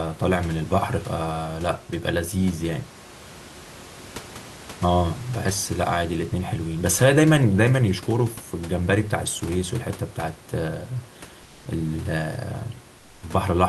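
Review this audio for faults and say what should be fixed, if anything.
From 12.97 to 13.21 s, the sender likely paused transmission under Opus discontinuous transmission, so the receiver substituted comfort noise in place of the background: for 240 ms the room noise, about 30 dB below the loudest speech, becomes a flat, featureless hiss about 2 dB quieter. Turning off DTX on the sending side would prevent it.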